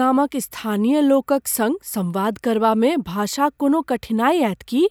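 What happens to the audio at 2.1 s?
Nothing goes wrong at 2.1 s; the speech runs through that moment intact, with no dropout, click or distortion.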